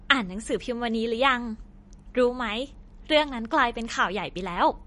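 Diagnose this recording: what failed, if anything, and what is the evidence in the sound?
Codec stage: the speech sounds watery throughout and nothing survives above 10.6 kHz. That's likely MP3 compression starved for bits, around 40 kbps, with weak bands flickering frame to frame.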